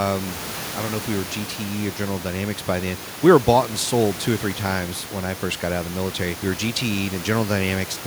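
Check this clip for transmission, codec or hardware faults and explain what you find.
Nothing here sounds off in how the audio made its way from the microphone to you; the only thing sitting under the speech is a bit of room noise, about 15 dB lower, and that's just part of the space it was recorded in.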